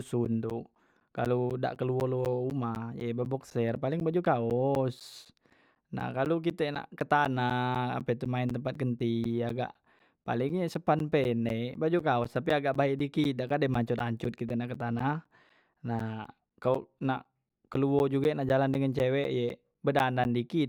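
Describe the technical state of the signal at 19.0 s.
At 19.0 s the speech is affected by periodic USB or driver dropouts, which run from 0.25 s to 20.5 s. Every 0.25 s, something blocking the USB bus or the audio driver interrupts the stream, and a short stretch of roughly 10 ms is lost and replaced with silence. Each gap cuts the waveform abruptly, producing a regular tick or pop four times per second that is heard only while speech is present.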